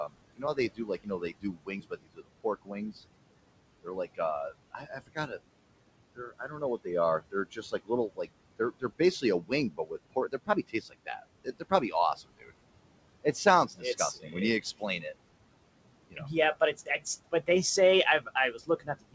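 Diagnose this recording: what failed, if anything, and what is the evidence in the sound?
The background hiss drops away in every pause and comes back up underneath the speech. That pumping runs through the whole clip and is the signature of noise suppressor artifacts from the call-processing stage. The suppressor estimates the steady room noise, which sits about 15 dB below the speech, and attenuates each frequency band it judges to be noise, frame by frame, by about 21 dB. So the floor tracks the talker instead of staying constant.

Parts of the speech itself sound swallowed, with consonants and word endings pulled down along with the background. This is speech cut by the noise suppressor, again in call processing. It occurs at 0.08–2.93 s (deepest drop about 22 dB, roughly a second affected in total), 3.83–5.32 s (about 18 dB), 6.15–12.51 s (about 21 dB, roughly one and a half seconds affected), 13.23–15.05 s (about 19 dB), and 16.1–17.48 s just before "they say" (about 18 dB). 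It occurs again from 18.2 s to the end, just after "they say" (about 22 dB). The gain decision misclassified low-energy speech frames as noise. The audio also carries no content above 8 kHz, consistent with the band limit of a G.722 call codec.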